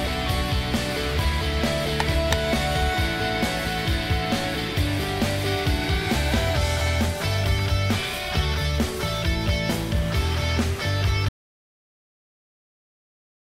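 From 2.00 to 2.33 s the loud passages turn harsh and fuzzy, a gritty distortion riding on every peak rather than the occasional isolated crackle. This is hard clipping: the signal was driven about 10 dB past what some stage in the chain could pass, so the waveform tops were sheared flat. Those squared-off peaks generate a spray of high harmonics that were never in the original sound, which is what gives this stretch its rasp.

At 11.29 s the audio stops abruptly and stays silent through to the end of the clip. The gap is dead digital silence, with no background noise or room tone underneath, so this is an audio dropout to silence rather than a quiet passage. The likely cause is that the input feed was lost partway through, through a disconnect, a link failure or an accidental mute, while the recorder kept writing zeros. Whatever sounded after that point was never captured.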